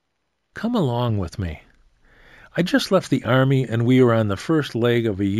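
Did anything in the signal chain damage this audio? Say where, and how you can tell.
Yes, at the sample-rate conversion stage, throughout the clip: imaging from linear upsampling. The band dulls above 8 kHz, and a faint mirrored copy of the spectrum sits between 8 kHz and 16 kHz, roughly 35 dB below the signal, heard as a light metallic shimmer on bright sounds. This fits a 16 kHz source raised to 44.1 kHz by straight-line interpolation, whose weak filtering leaves images. A spectrogram shows that band as a pale reflection of the content below 8 kHz.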